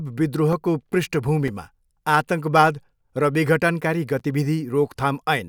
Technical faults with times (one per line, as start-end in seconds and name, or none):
0.53 block of digital silence
1.48 block of digital silence
4.19 block of digital silence